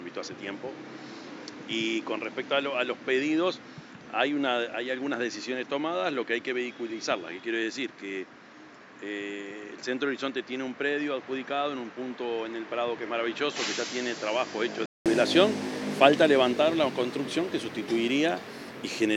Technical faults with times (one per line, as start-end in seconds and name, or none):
0.00-15.06 input switched to a poorer device